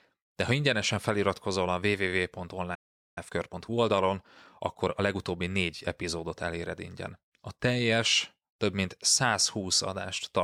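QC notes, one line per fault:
2.74–3.18 s, playback stall: the speech cuts out mid-flow into about 0.42 s of dead silence, then resumes. This is likely the player running dry of buffered data or having its output thread blocked until it recovered.
3.18–6.18 s, time-compressed catch-up: for three seconds the speech runs hurried, at about 1.1 times normal speed, yet keeps its natural pitch. The player is trimming its backlog by dropping tiny slices and cross-fading the seams.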